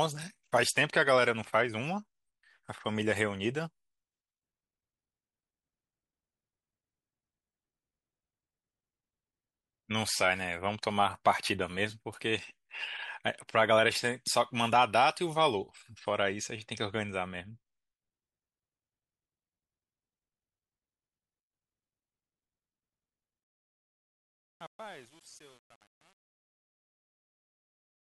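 Truncation distortion on a fade, 23.44 to 28.07 s: the undithered fade-out steps like 8-bit audio, so from 23.7 s the quiet tail grows gritty.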